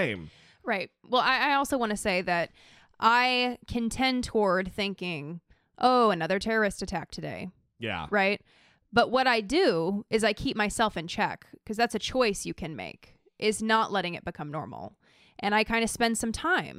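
No technical faults can be heard anywhere in the speech. Nothing in the recording calls for a time stamp or a note on how it was captured or delivered.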